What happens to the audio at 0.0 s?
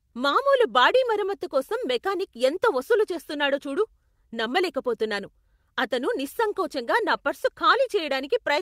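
Nothing goes wrong at 0.0 s; the audio is intact there, with no dropout, click or distortion.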